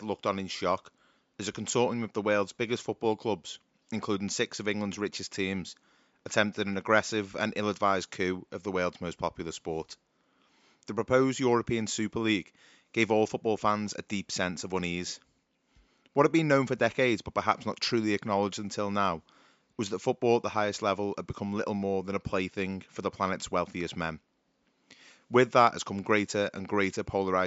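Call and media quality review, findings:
No system faults found in the speech path; the only background is the room's own noise at the microphone, sitting about 46 dB below the speech level.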